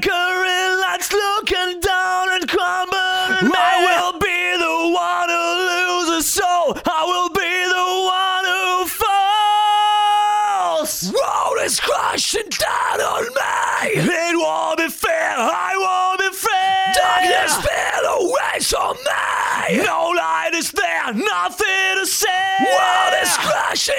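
No technical faults can be heard anywhere in it.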